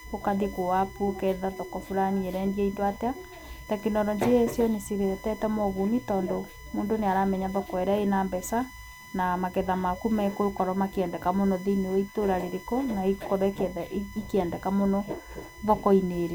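From start to finish, a steady USB whine sits under the speech. It is a fixed-pitch tone built on 1 kHz. Its strongest part is the harmonic at 2 kHz. It stays roughly 20 dB below the speech. The cause is electrical. The USB bus draws current in 1 ms frames, and that pulsing leaks into the audio through the power or ground wiring.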